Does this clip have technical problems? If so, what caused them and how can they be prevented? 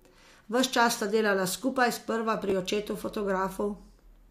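Yes. Just after "sta delala skupaj sprva", at 2.50–2.52 s, chunks out of order: a 5.8 ms chunk plays three chunks late, making a brief jumbled moment. The waveform shows three hard joins; the spectrogram shows thin vertical broadband lines. Sequencing chunks by timestamp before playback or writing prevents this.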